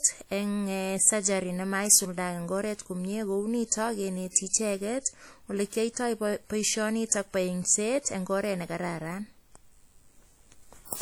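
Throughout, the speech carries washy, ringing artefacts with hiss breathing alongside it, likely from WMA compression at a rate that fits about 48 kbps. On a spectrogram, weak components drop out as gaps. At 4.30 s, pre-echo smears hiss across about 53 ms ahead of an attack, softening it. The waveform shows low noise preceding the onset.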